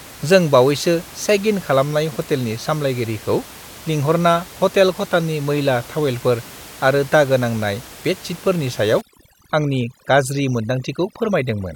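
From 9.01 s to the end there's overdone noise removal. The reducer is pushed so hard that bands near its noise estimate get cut, along with quiet speech detail. The room noise, about 20 dB under the speech, drops to twinkly near-silence.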